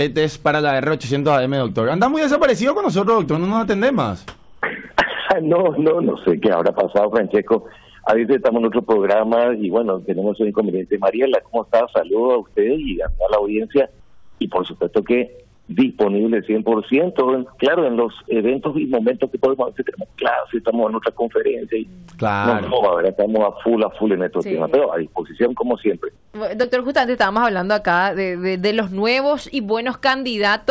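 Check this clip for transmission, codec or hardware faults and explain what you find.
There is one fault, comfort noise in place of the background, heard in four pauses. It happens at 4.28 to 4.62 s (340 ms, about 4 dB louder), 14.00 to 14.40 s (400 ms, about 5 dB quieter), 15.54 to 15.68 s (140 ms, about 7 dB quieter) and 26.16 to 26.34 s (180 ms, about 6 dB quieter). The likely cause is discontinuous transmission. The sender's activity detector judged these quiet stretches, some 33 to 38 dB below the loud parts, as silent and stopped sending. The receiver then filled each gap with synthetic noise shaped like the background. The real background's texture gives way to a flat, featureless hiss with a level step at each edge. A dropout would leave true silence and concealment would smear or repeat nearby sound, so this steady stand-in noise points to comfort noise instead. Throughout the clip, the G.722 call path leaves nothing above 8 kHz.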